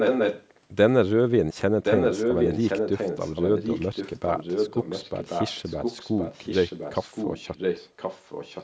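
Echo leak from 0 to 0.59 s and from 1.83 s to the end: a copy of the speech returns about 1.07 s late, first roughly as loud as the speech, then somewhat quieter, likely from a loudspeaker echo canceller letting it through.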